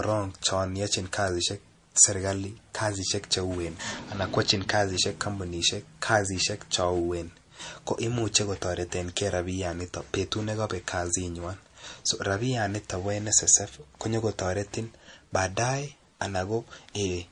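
What went wrong is most likely low-bitrate audio saved at a high bitrate. The speech was squeezed through an MP3 encoder at a rate that fits something near 40 kbit/s, then re-encoded as a much larger MP3 that could not restore what the first pass had discarded. From start to finish nothing is heard above 10.6 kHz, so the top of the speech is missing, and the artefacts of the first encoding remain despite the generous second file.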